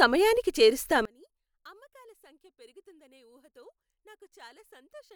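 One channel inverted, from 1.05 s to the end: the speech collapses by about 32 dB to a faint residue. The likely cause is reversed polarity on one stereo channel, so the centred voice cancels when both sides sum to mono.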